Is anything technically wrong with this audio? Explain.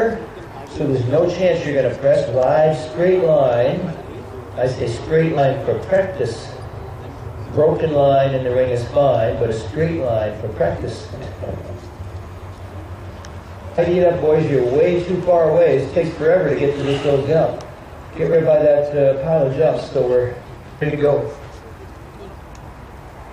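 Yes. Throughout, sample clock jitter: the converter's clock wanders by under half a microsecond, mistiming samples and adding a faint roughness, about 55 dB down, that grows on loud, bright passages.

Compressed frames skipped at 4.32, 5.37, 7.18, 11.22, 13.77, 18.32 and 20.81 s: whole frames of about 23.2 ms go unplayed, so the sound jumps ahead, mostly by about 70 to 300 ms, half a second at 20.81 s.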